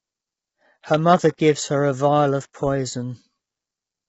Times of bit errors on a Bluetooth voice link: none

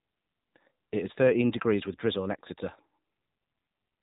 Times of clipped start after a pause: none

